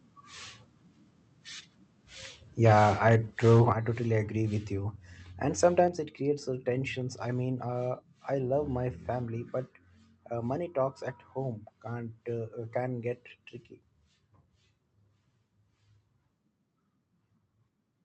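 From 2.63 to 3.16 s the loudest syllables turn harsh and crackly, peaks running about 5 dB past the converter's limit with a few percent of samples flattened. That's microphone overload, with the input gain likely set too high for the converter. It hits again from 3.45 to 3.72 s (about 4 dB over, a bit more clipping) and briefly from 5.64 to 5.8 s (about 1 dB over), just before "it creates uh tensions".

Each burst brings the microphone volume stepped down: at 2.72 s everything drops about 2 dB, at 3.72 s a bigger 7 dB, and at 5.88 s about 5 dB, right before that same phrase. Voice and background fall together, so it's likely the call software's gain control reacting to the clipping. All of this sits on top of a call path whose top end stops around 8 kHz.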